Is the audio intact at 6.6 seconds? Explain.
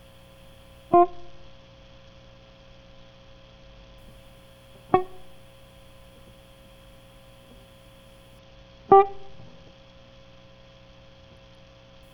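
Yes, the music plays through 6.6 seconds intact, with no dropout, click or other fault at that moment.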